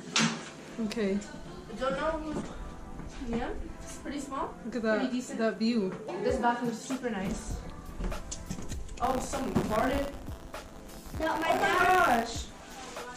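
From 9.03 s to 12.6 s there's buffer tearing: a steady, robotic rattle at 100 Hz riding on the sound, present only while there's signal. The writer and the hardware reader of the ring buffer have drifted out of step, so every 10 ms period contains a small sliver of stale audio, roughly 30 ms old, butted up against current material with hard edges on both sides. Those joins repeating at the buffer rate are what you hear as the buzz.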